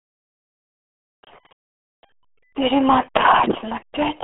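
Throughout, heavy RealAudio 14.4 codec damage leaves a hard spectrogram ceiling at 3.7 kHz; speech sounds muffled and gargly, which fits an 8 kbit/s dial-up stream.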